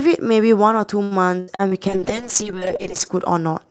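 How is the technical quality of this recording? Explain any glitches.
The recording has two clear glitches, both typical of an online call: a burst of choppy, robotic sound in the first half, followed by a longer stretch of rough, degraded quality.

Repeated packet loss (robotic sound), 1.03 to 1.74 s: Audio packets went missing four times in quick succession. Each time, the receiver papered over the hole by extending the preceding sound, and the next dropout arrived before the audio had properly recovered. About 31% of this stretch is patched-in sound, and the longest gap is 77 ms. The result is choppy speech with small pieces missing.

Call bitrate drop, 1.90 to 3.18 s: The connection's available bandwidth appears to have collapsed, forcing the Opus encoder to work with far fewer bits. The sound points to a fall from around 32 kbps to roughly 7 kbps, with the lowest level held for about 1.2 s. 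At that rate the encoder quantises coarsely and trims the upper frequencies, so the speech turns rough, watery and muffled until the bitrate climbs back. Before this drop, the call audio reaches up to about 8 kHz.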